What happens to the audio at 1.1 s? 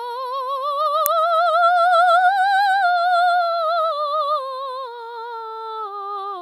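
At 1.06 s an electrical switching spike, likely an arc from a nearby switch, adds a sharp snap, seen as a thin waveform spike and broadband vertical spectrogram line.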